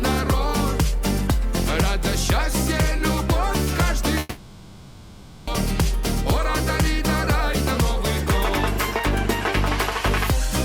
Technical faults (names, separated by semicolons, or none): long network dropout